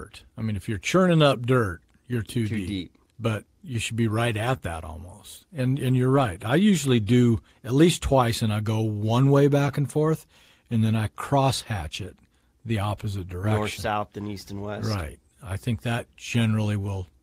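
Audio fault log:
4.45 to 4.55 s, lost packet rebuilt from error correction. Just after "you should be right", about 60 ms turns rough and noisy. There is no gap. This fits three lost packets replaced by low-bitrate copies carried in the packets that followed.
4.57 to 4.61 s, short concealed packet loss. Just before "that almost", a brief smear appears. A 20 ms piece arrived too late to play. The decoder filled about 19 ms by extending the preceding sound, then blended back into the real audio.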